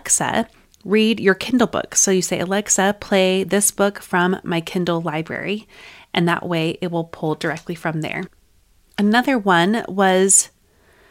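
Nothing in this speech recording stands out as a technical fault, so there's no problem to point to anywhere along the way.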